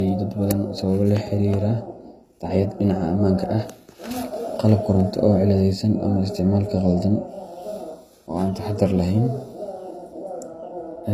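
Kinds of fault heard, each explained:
Low-bitrate audio saved at a high bitrate: the speech was likely first squeezed through a low-bitrate codec, then re-encoded at a generous rate that cannot restore what was discarded, so the first encoding's artefacts persist throughout and nothing is heard above 14.9 kHz.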